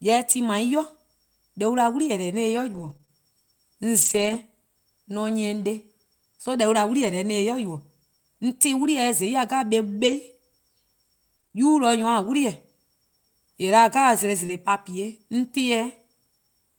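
From 2.73 to 4.35 s the speech has scattered short gaps: about four small holes, none longer than roughly 30 ms, adding up to 80 ms of missing audio. Packets arrived late or not at all, and the receiver bridged each hole by extending the preceding sound. The result is a handful of brief ticks and smears in otherwise continuous speech, touching only a small fraction of that stretch.

At 7.01 to 7.07 s comes a lost packet rebuilt from error correction. About 40 ms were lost, which fits two 20 ms packets. Each following packet carried a low-bitrate backup copy, and the decoder played that instead of leaving a hole. Nothing drops out, but that fragment sounds coarser and noisier than the audio around it.

The second run of scattered short gaps covers 8.83 to 11.56 s. There are about five holes, again each around 30 ms at most, with 100 ms missing in total. They are patched the same way and heard as sparse hiccups and small smears spread across the span.

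At 14.46 s a short concealed packet loss removes 20 ms. The receiver covers it with 23 ms of continued sound before blending back, producing a quick smear or tick. From 14.49 to 14.51 s, inside that same moment, 20 ms is also a lost packet rebuilt from error correction, so the tail of the event has the rougher, noisier texture of the low-bitrate copy.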